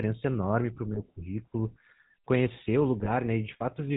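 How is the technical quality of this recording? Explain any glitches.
The technical quality is limited: the speech has passed through an old mobile-phone codec, and there are two brief dropouts.

Throughout, the GSM full-rate codec gives the speech a buzzy, gravelly roughness and removes everything above 4 kHz, consistent with the 13 kbps full-rate coder. It rebuilds the voice from a vocal-tract model driven by a sparse, regularly spaced pulse excitation. That grainy buzz is what distinguishes it from plain band-limiting.

At 0.94 to 1.06 s and again at 3.04 to 3.10 s, lost GSM frames are heard. Each points to a single lost 20 ms frame. The decoder repeated the last good frame's settings, so the sound briefly holds as a metallic ring instead of cutting to silence or clicking.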